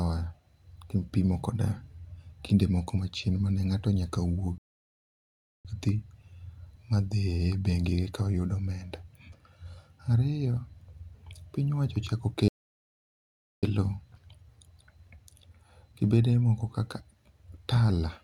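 At 4.58 s the speech cuts to silence for about 1.07 s, resuming at 5.65 s, and at 12.48 s it stops again for about 1.15 s until 13.63 s. These are playback stalls, likely the player running short of data or having its output thread held up. Each pause lasts over a second, much longer than the brief gaps of a packet or buffer dropout, and the speech halts in mid-flow with no fade before the sound returns.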